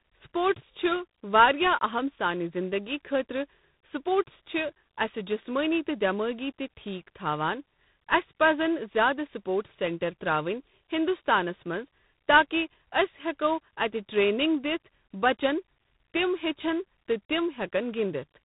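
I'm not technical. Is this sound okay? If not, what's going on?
No. This is tandem speech coding: the call passed through two phone systems in a row, each squeezing it again, so the speech sounds rough and noisy throughout, with nothing above 3.8 kHz.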